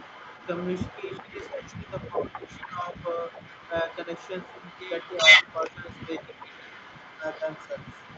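A speech recording carries a faint echo leak throughout: a delayed copy of the talker comes back about 383 ms later, sitting roughly 15 dB below the direct voice. On a spectrogram this shows as ghostly repeats of each syllable's harmonic pattern, shifted right by that fixed gap and much paler. The likely cause is a far end on a loudspeaker whose echo canceller let part of the returned signal through. The voice also shows speech suppressed in double talk, with dips from 1.0 to 3.28 s, 3.67 to 4.1 s, 5.23 to 6.74 s and 7.19 to 7.71 s. The two longer spans drop by around 10 dB, the shorter ones by around 5 dB. In the waveform these appear as sudden pinches in the envelope, and on the spectrogram as thinned, darker patches, most visible in the upper bands, which end at 8 kHz. This is likely an echo canceller turning down the near talker while the other side was also speaking.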